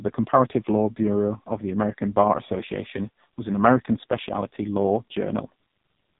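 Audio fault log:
throughout, AMR narrowband mobile codec: the speech sounds heavily buzzy and synthetic, with nothing above about 3.8 kHz, because the mobile speech codec rebuilds the voice from a vocal-tract model fed by a few pulses per frame, and this damage points to a very low rate near 5.15 kbps.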